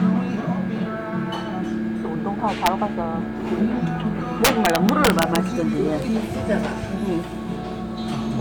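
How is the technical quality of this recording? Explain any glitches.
The recording has integer overflow faults. At 2.66 s a sharp crack occurs, and from 4.45 to 5.36 s a longer burst of harsh cracking follows. Here the sample values exceeded the largest storable integer, by about 1 dB at first and about 5 dB later, and wrapped to the opposite extreme instead of being limited. Each such peak jumps across the full range, producing violent snapping far sharper than ordinary clipping.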